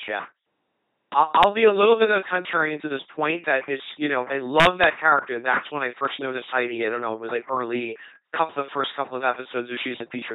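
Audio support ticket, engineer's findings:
Speech buzzy and mechanical for the whole clip, robot-like, heavy damage; no content above about 3.9 kHz. Component: LPC-10 vocoder in the path, behaviour fits a 2.4 kbit/s setting. Mechanism: each frame forced fully voiced (pulse buzz) or fully unvoiced (hiss) through a short all-pole filter, so natural voice texture is lost throughout.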